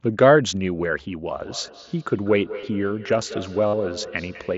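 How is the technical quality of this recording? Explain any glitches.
The recording has two audible problems: a repeating echo through most of its length and two brief dropouts that are patched over. The wideband headset codec limits the sound to about 8 kHz with light graininess.

From 1.4 s to the end there is a feedback echo between two devices. Two devices in the same room are on one call, and one plays back what the other's microphone sent. That microphone picks it up again, and neither echo canceller removes sound played by the other device. Each syllable returns about a fifth of a second later, peaking at about 14 dB below the speech, thinner and more ringing. On a spectrogram, faint copies of each syllable repeat to the right at a regular spacing.

There is concealed Bluetooth headset packet loss at 2.61 s and from 3.67 to 3.73 s. Packets between headset and phone went missing, and the receiver filled each gap by repeating the closest-matching recent stretch of waveform. 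The first gap is very short, about two lost frames. The second lasts 60 ms, which points to roughly eight lost frames, and sounds like a buzzy held tone at full level, ending in a slight warble. The waveform shows a periodic, evenly repeating patch with no drop in level, and the spectrogram shows flat horizontal harmonic stripes.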